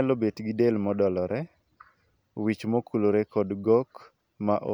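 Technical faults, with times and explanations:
Nothing to flag here; the recording runs along without a single technical hiccup worth a timestamp.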